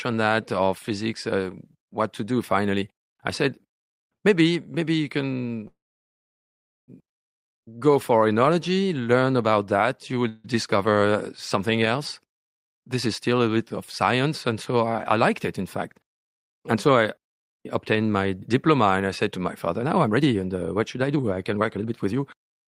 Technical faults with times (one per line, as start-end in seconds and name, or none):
5.67-6.90 call audio freeze
10.29-10.46 call audio freeze
14.72-16.90 jitter buffer speed-up
19.79-22.64 jitter buffer speed-up